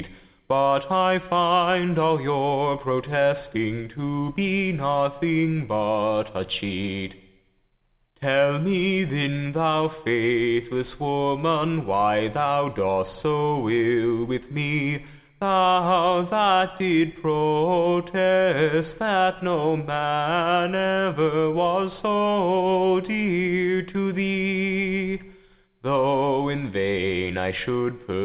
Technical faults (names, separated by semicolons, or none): none